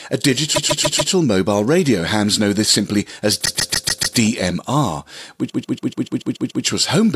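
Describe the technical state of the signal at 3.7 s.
At 3.7 s the speech is inside a repeated-frames fault running from 3.45 to 4.17 s, just after "know this simply as". A 144 ms stretch of compressed audio was sent to the decoder again and again. That length fits a run of six short codec frames. The decoder plays the block five extra times, so it is heard as a rapid stutter. The repeats add 720 ms.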